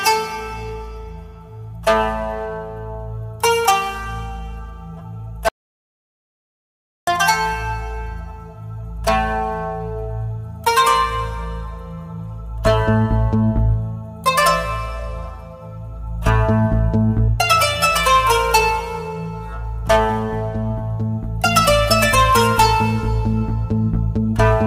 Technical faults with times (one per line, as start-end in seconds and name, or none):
5.49-7.07 audio dropout to silence